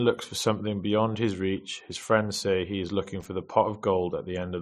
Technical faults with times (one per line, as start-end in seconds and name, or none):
3.20-3.25 loose connector crackle